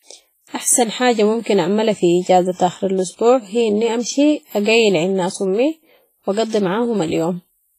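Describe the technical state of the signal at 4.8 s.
At 4.8 s the speech has the same smeared, washy quality it carries from start to finish: a ringing edge around sounds and a hiss that swells and fades with the signal, with nothing above about 15.3 kHz. The damage is heavy and most likely comes from WMA compression at a low bitrate, something like 24 kbps. Its long transform blocks spread quantisation noise over tens of milliseconds and throw away weaker detail.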